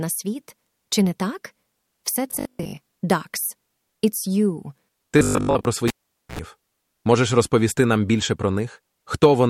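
Speech, with two stretches of robotic sound from repeated short buffers, at 2.31 to 2.77 s and again at 5.19 to 5.65 s. Each turns the speech into a rigid metallic buzz at 50 Hz, likely because late-arriving audio was padded by looping the last 20 ms, replacing most of the real signal. A cable pulled and plugged in follows: a pop at 5.88 s, about 464 ms of near silence, a 72 ms burst of 60 Hz mains buzz as the plug reseats, and a second pop at 6.39 s when the sound returns.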